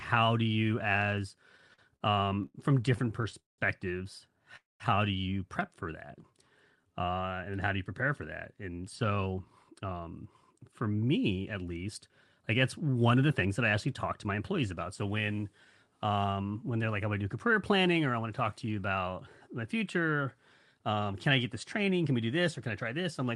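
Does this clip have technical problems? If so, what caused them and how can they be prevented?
Yes, there are a few. Repeated stalls (stutter) show up from 1.57 to 2.55 s, right after "do you as", with nine short hangs up to 89 ms, and again from 2.96 to 3.59 s, with eight hangs up to 188 ms. Packets kept arriving late, so the jitter buffer kept running dry and the receiver stretched the last sound each time. Nothing gets lost, but the audio drags. A steadier network path or a slightly deeper buffer would prevent it.

At 4.56 to 4.81 s there's a call audio freeze. The sound hangs, fades, and sits silent for about 180 ms, pushing everything after it 237 ms later. Packets were likely held up in transit, emptying the buffer. Prioritising voice traffic (QoS) would help.

Jitter buffer slow-down hits 5.83 to 6.32 s at 94% speed, adding 38 ms, and 6.76 to 7.06 s at 82%, adding 62 ms, just before "and how do you". 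The receiver repeated pitch periods to rebuild its reserve, so the sound drawls at unchanged pitch. Fewer late packets would keep the buffer from dipping.

Jitter buffer speed-up runs from 8.68 to 10.10 s after "you prepare for that" at 109%, dropping roughly 150 ms, then from 10.52 to 15.02 s at 107%, dropping about 300 ms. Too much audio had piled up, so the receiver trimmed pitch periods and the sound turns hurried. Avoiding bursty packet delivery would prevent it.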